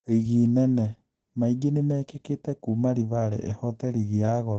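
Throughout the speech, nothing reaches above about 8.9 kHz. The sound is muffled and hoarse, and heavily damaged. This is likely Opus compression in its speech (SILK) mode. A narrowed wideband signal like this fits a low bitrate near 12 kbps.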